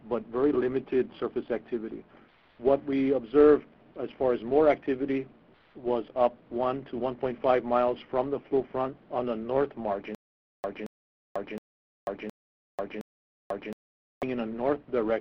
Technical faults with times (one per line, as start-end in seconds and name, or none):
10.15-14.23 stutter with silent gaps